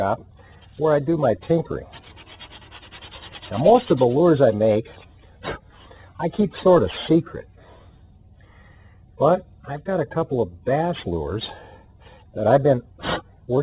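Aliasing runs through the whole clip. The audio was resampled downward with no anti-alias filter, so content above a 4 kHz fold point, consistent with an 8 kHz rate, reflects back as unrelated pitches about 20 dB under the signal, leaving high sounds gritty and metallic.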